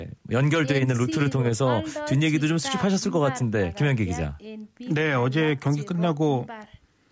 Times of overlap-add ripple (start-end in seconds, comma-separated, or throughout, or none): 0.64-1.56